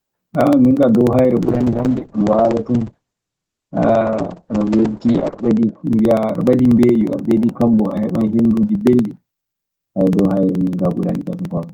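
From 0.11 s to the end, periodic USB or driver dropouts skip a sliver of audio every 0.06 s, giving regular ticks whenever speech sounds. From 1.42 s to 5.89 s, a call bitrate drop takes the encoder from 40 to 9 kbps. Bandwidth shrinks from 20 kHz to 8 kHz. The speech turns muffled and rough for about four seconds.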